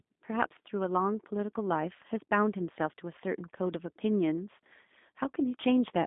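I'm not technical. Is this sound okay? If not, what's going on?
No. The whole clip has passed through a G.729 codec, a speech squeezer used on internet phone calls. It rebuilds the voice from a rough model of the throat and mouth plus a few pulses per tiny slice of time, so the result sounds rough and somewhat artificial. Nothing above about 3.7 kHz survives, and very low sound below 200 Hz is gone too. That gives the thin, boxed-in phone-line tone heard from start to finish.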